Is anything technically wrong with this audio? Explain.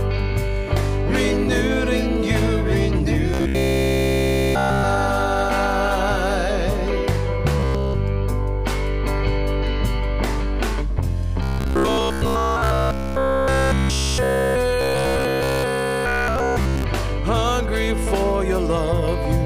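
Yes. From 3.34 to 4.85 s, 7.60 to 7.94 s, 11.43 to 14.56 s and 14.81 to 16.85 s, the sound collapses into a stiff, metallic drone fixed at 66.8 Hz, with essentially nothing fresh coming through. This is robotic sound from repeated short buffers. Playback likely ran out of incoming audio and kept looping a 15 ms fragment in place of the missing material, and that repetition rate sets the buzz pitch.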